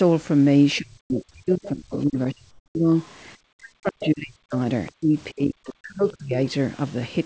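Speech suppressed in double talk begins at 0.79 s and runs to 2.9 s. The talker's level sinks by as much as about 40 dB in stretches totalling around two seconds, likely because the echo canceller mistook simultaneous talk for echo and attenuated everything. Within that span, comfort noise in place of the background appears at 1.01–1.10 s. For 90 ms the real room tone gives way to a smoother synthetic noise about 15 dB quieter, where the sender likely paused transmission during silence. The other side's voice leaking through follows at 1.63–2.03 s, about 15 dB under the speech. Comfort noise returns at 2.51–2.75 s, 240 ms about 10 dB lower. Faint leakage, about 35 dB down, comes at 3.01–3.14 s. Suppression recurs at 3.54–4.55 s, with a brief leak at 4.0–4.08 s, another about 20 dB down at 4.55–4.92 s, and a final dip at 4.9–6.38 s. Throughout, nothing sounds above 8 kHz on this G.722 path.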